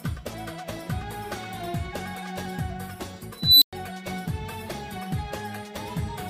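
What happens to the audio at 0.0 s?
Nothing goes wrong at 0.0 s; the audio starts cleanly there with no audible fault.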